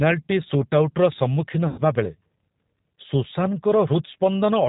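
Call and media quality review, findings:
G.729 codec, throughout. Speech band-limited, nothing above 4 kHz. Rough, slightly synthetic texture, plainly audible. Component: narrowband VoIP codec, consistent with 8 kbit/s G.729A. Mechanism: each 10 ms frame rebuilt from a vocal tract filter, pitch predictor and sparse pulses, so fine detail is lost.

VoIP packet loss concealed by the speech codec, 1.68 to 1.81 s. Sound smeared into a fading buzzy tone or coloured noise, weak for a short stretch after. Component: decoder concealment. Mechanism: about 100 ms of packets missing, fitting ten lost frames. Decoder extrapolates its last pitch and filter with falling gain.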